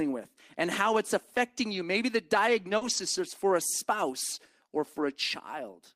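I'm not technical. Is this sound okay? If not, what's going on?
No. There are small glitches where bits of the call went missing on the way.

At about 2.77 to 2.83 s, just before "is for a spouse", there is a short concealed packet loss. About 40 ms of sound never arrived. The receiving end guessed what should be there by stretching the last sound a little. You hear a quick smear or wobble. It lasts only a blink.

Right after that, from about 2.81 to 3.03 s, comes a lost packet rebuilt from error correction. More pieces went missing here. Each later piece carried a rough spare copy of the lost one, so the receiving end played that copy. There is no gap, but about 120 ms sounds grainier and noisier. The same thing happens again at about 4.97 to 5.03 s, just after "for a spouse or". That one lasts about 40 ms.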